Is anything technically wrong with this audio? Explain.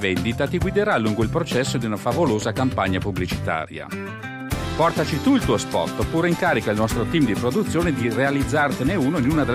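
No, nothing technically wrong can be heard in this audio. No fault shows up anywhere in the recording.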